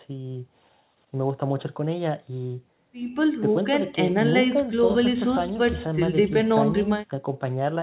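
Nothing goes wrong anywhere in this speech recording, which just carries the narrow telephone-style band you'd expect from a WebRTC call path using G.711 A-law at 64 kbps, with nothing above 4 kHz.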